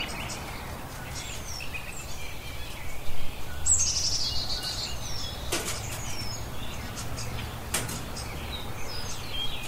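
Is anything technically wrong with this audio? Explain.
No, nothing technically wrong can be heard anywhere in this recording of sounds.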